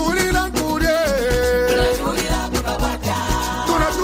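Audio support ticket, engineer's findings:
Nothing stood out on listening; no audible fault found anywhere in the clip.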